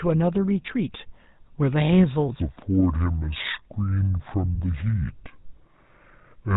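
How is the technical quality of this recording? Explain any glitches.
The whole recording is quality-limited and carries a speed fault from 2.41 s to the end.

Throughout, the speech has a buzzy, gravelly roughness, and nothing comes through above 4 kHz, so it sounds narrow and harsh. That is the GSM full-rate codec, and the damage is plainly audible. The codec models the vocal tract and drives it with a coarse pulse excitation that keeps only every third sample. The result fits the low-bitrate 13 kbps GSM phone codec.

From 2.41 s to the end, the speech suddenly turns deep and slow, dropping around ten semitones in pitch while stretching out in time. This section is at the wrong speed, playing at 0.603 times its proper rate. Because speed and pitch move together here, the change sounds like a slowed recording rather than a different talker. The likely cause is that this part was played or edited against the wrong clock.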